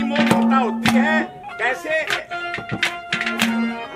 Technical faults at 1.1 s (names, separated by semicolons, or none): none